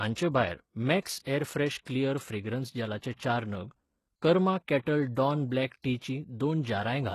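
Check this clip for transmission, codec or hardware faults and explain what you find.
One codec fault runs through the whole speech clip. The treble sounds synthetic, with gritty, lispy s sounds and nothing above 12.3 kHz, likely HE-AAC compression rebuilding highs by spectral band replication, at a rate fitting roughly 16 kbps.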